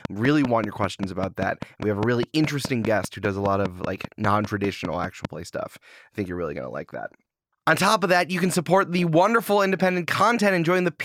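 From 0.05 to 5.26 s, a train of clicks, likely interference, ticks steadily at 5 per second before "play stuff": even waveform spikes, spectrogram vertical lines.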